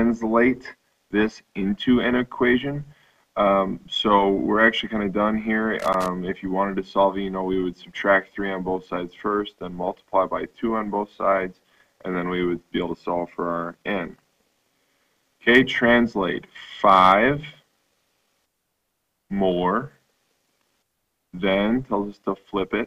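From 5.80 s to 6.08 s, an irregular burst of crackle and scratching cuts across the audio for roughly a quarter of a second. This is loose connector crackle: a worn or dirty contact was shifting, so the connection kept making and breaking in quick succession. Each break chopped the signal, and any DC riding on the line jumped with it, adding pops.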